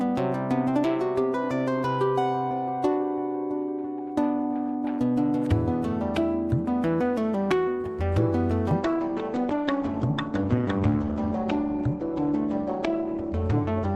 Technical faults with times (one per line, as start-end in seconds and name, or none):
8.80-13.96 adaptive stream at a lower bitrate